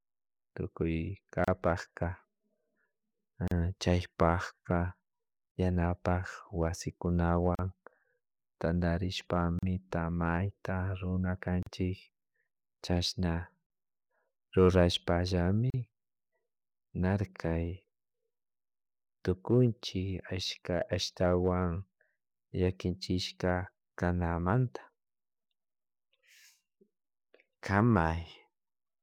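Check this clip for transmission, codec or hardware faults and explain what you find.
The clip has one fault: a gap at a join of encoded pieces, repeating every 2.0 s. Silences open at 1.44, 3.48 (just before "chaypakpa yanapak"), 5.51, 7.55, 9.59 (just before "mayta runa"), 11.63 (just after "mayta runa"), 13.66 and 15.70 s. Each lasts about 38 ms, and the first about 32 ms. The speech was encoded in 2-second segments and concatenated untrimmed, so each encoder's start-up delay and last-frame padding remain. The result is a brief dropout with softened edges, after which the speech resumes where it stopped.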